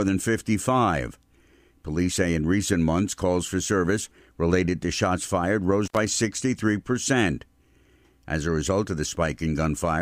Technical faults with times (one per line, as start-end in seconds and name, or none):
5.86-5.97 intermittent contact